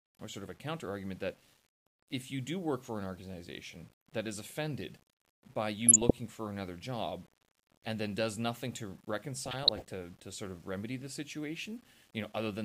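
Throughout the speech a grainy distortion tracks the signal, with quiet passages the roughest, likely low bit depth without dither, around 8 bits, noise about 30 dB down. Unlike steady hiss, it changes with the sound. From 5.84 to 6.11 s, after "that is offended by" and before "for another job and", DAB burbling appears: bit errors slip past error correction, making individual sub-bands jump and producing short blips of noise rather than clean dropouts. It returns from 9.46 to 9.89 s, between "then does nothing to" and "to sort of remedy".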